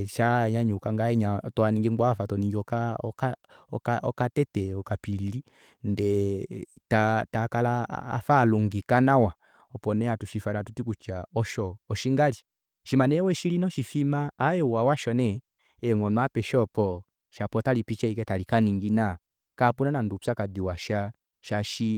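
No technical fault can be heard anywhere in the recorded speech, and the signal holds steady throughout.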